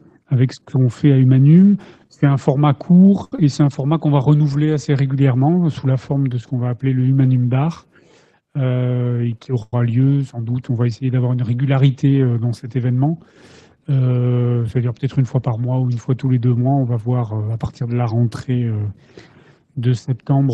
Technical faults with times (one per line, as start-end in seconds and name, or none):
3.24-3.33 short stall from a late packet
3.36-3.39 short concealed packet loss
8.77-9.34 jitter buffer speed-up
9.62-9.78 call audio freeze
12.85-13.11 jitter buffer speed-up
16.93-17.81 jitter buffer speed-up